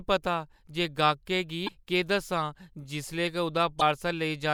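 At 1.65 s and again at 3.78 s, the speech runs into damaged data in a compressed stream. Bytes in the encoded file are corrupted, so the decoder cannot read those frames correctly, loses its place in the stream and hunts for the next valid frame header before resuming. Each time this produces a short, harsh blip or chirp, roughly 40 ms long, cutting across the speech.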